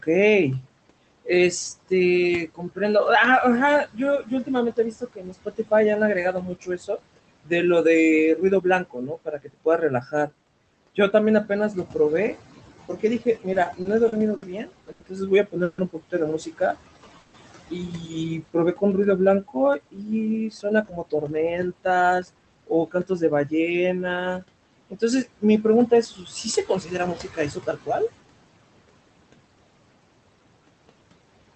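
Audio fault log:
throughout: noise suppressor artifacts. The steady room noise, about 16 dB under the speech, is pulled down by about 21 dB wherever the suppressor judges a band to be noise. It is recalculated every frame, so the background drops away between phrases and comes back up under the speech. The speech is heard through a band limit near 8 kHz.
0.02–2.80 s, 3.86–11.95 s, 12.89–27.89 s: speech cut by the noise suppressor. In these spans the suppressor misreads low-level parts of the speech as background and attenuates them with the noise: about 18 dB at most in the first span, about 21 dB in the second, about 22 dB in the third. The affected parts total a few tenths of a second, then about 2 s, then about 3 s. Soft consonants and trailing word endings sound swallowed or faded.
13.53–14.44 s: repeated stalls (stutter). Five short holdups occur in under a second, the longest 60 ms, together adding about 140 ms of stretched sound. 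Packets reached the receiver late over and over, so the jitter buffer kept emptying and the last sound was extended each time until new audio came in. Nothing is lost, but the passage drags and stutters rather than flowing.
14.92–15.02 s: short stall from a late packet. A single packet missed its playout time and the jitter buffer ran dry. The receiver held the preceding sound for about 80 ms, then carried on from the same point once the packet arrived. Nothing is skipped, but one sound is audibly prolonged, with a slight buzz or dip where the continuation was synthesised.
15.64–15.80 s and 17.20–17.36 s: call audio freeze. At each point the audio halts and the last sound is carried on as a fading buzz or hiss for about 140 ms. It never reaches silence before playback resumes exactly where it left off. The likely cause is packets delayed in transit, leaving the jitter buffer empty until they arrive. 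Each freeze inserts a pause, and no audio is missing.
16.89–17.18 s: jitter buffer slow-down. Playback runs at about 91% speed with pitch unchanged, adding about 37 ms. With its reserve running low, the receiver repeated single pitch periods and fragments of pauses to rebuild the buffer. Vowels and pauses sound slightly drawn out, just before the second freeze.
19.98–22.63 s: jitter buffer speed-up. Playback runs at about 111% speed with pitch unchanged, dropping about 0.3 s in total. The buffer had accumulated more audio than its target. The receiver trimmed short slices of one or a few pitch periods again and again to bring the delay back down. The speech sounds hurried and slightly compressed.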